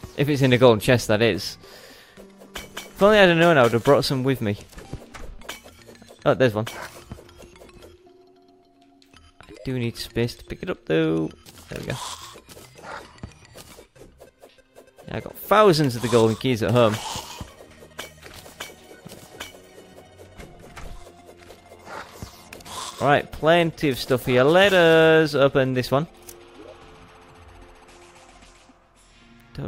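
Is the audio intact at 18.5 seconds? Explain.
Yes, the audio at 18.5 seconds is intact, with no dropout, click, distortion or other fault at that moment.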